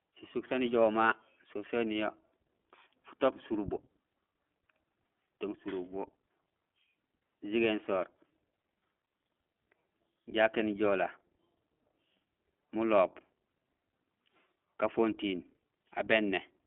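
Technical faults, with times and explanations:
Throughout: iLBC codec. The speech sounds boxy and thin, with nothing below about 200 Hz or above 3.4 kHz, as on a telephone line. It also has a plainly audible rough, synthetic edge. The codec rebuilds the excitation of each short frame on its own, without drawing on the one before. Small breaks between frames give that buzzy texture. The roughness fits 20 ms frames at the 15.2 kbps mode.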